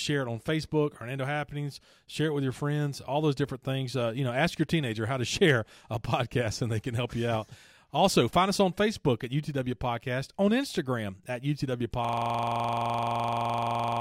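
From 12.05 s to the end, a 42.67 ms slice repeats as a 23.4 Hz stutter: a system hang loop, fitting a frozen 2048-sample ring buffer.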